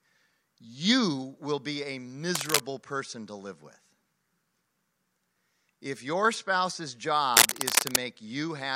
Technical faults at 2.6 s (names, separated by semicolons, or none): cable scratch noise